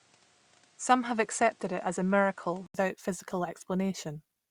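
Input switched to a poorer device, 0.0 to 2.75 s: the speech lacks anything above 10.1 kHz and carries faint added background noise, likely a lesser microphone, before an 80 ms gap restores fuller sound.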